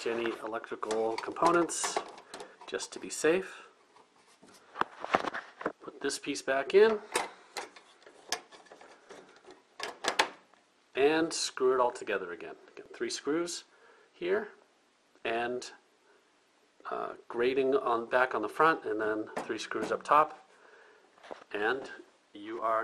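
Across the whole clip the sound is dull and carries a gurgling, grainy distortion, most likely from MP2 compression at a rate around 80 kbps. Layer II divides the spectrum into 32 fixed sub-bands and, short of bits, drops the upper ones entirely while coarsely quantising the rest. On a spectrogram the top end shows a hard ceiling with blocky patches blinking in and out. The waveform looks roughened rather than clipped.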